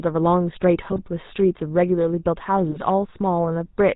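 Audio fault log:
throughout GSM full-rate codec: the speech has been squeezed through the original 13 kbps GSM coder, which models the vocal tract and excites it with a sparse train of regularly spaced pulses, keeping just one excitation sample in three. Nothing above 4 kHz survives, so the top end is gone, and the coarse pulse excitation leaves a plainly audible buzzy, gravelly roughness laid over every voiced stretch.
0.79–0.99 s GSM bit errors: corrupted bits, at a rate of about 1.6%, reached the decoder and spoiled its filter, pitch and gain parameters across this stretch, which points to roughly eleven 20 ms frames being hit. The misread values bend the spectral shape and throw the level around frame by frame, so the speech breaks up into squawks, pops and gargling.
2.71–2.85 s GSM bit errors: a shorter burst, at a rate of about 1.2% and consistent with around seven damaged frames, again feeds wrong spectral-envelope, pitch and gain values to the decoder. 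The result is the same brief gargled, squawking distortion.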